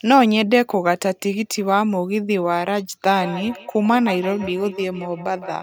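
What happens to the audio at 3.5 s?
At 3.5 s you're inside a stretch of feedback echo between two devices that starts at 3.18 s and runs to the end of the clip. Two devices in the same room are on the call, so one plays back what the other's microphone sent, and that mic hears it again. Each device's echo canceller only removes its own playback, so the repeats get through. The speech comes back roughly every 150 ms, thinner and ringier, peaking at about 13 dB below the speech.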